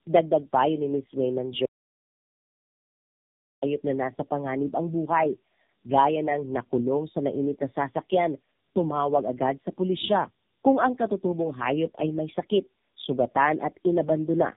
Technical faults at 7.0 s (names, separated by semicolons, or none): tandem speech coding